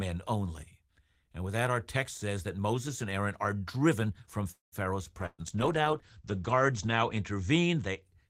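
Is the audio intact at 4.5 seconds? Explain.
No. From 4.51 to 4.75 s the speech stalls into a fading buzz that drops to about 0.12 s of silence, then resumes where it stopped with nothing lost. This call audio freeze is likely packets held up in transit, emptying the jitter buffer and inserting a 0.21 s gap.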